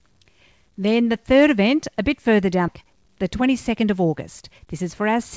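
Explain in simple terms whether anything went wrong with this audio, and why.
Yes, two things went wrong here. At about 2.68 s, right after "event a bit further", there's a skip ahead: nearly half a second of speech got thrown away while later audio was already queued, so playback jumps straight over it with no gap to warn you.

Then from 2.81 s to 5.16 s you get a jitter buffer speed-up. Too much audio had piled up, so the receiver kept snipping out tiny pitch-length slices, about a fifth of a second in total. Speech runs roughly 8% faster at the same pitch and sounds a bit rushed.

The call codec, which looks like G.722, cuts off everything above 8 kHz, so the speech has that familiar slightly dull call-line sound.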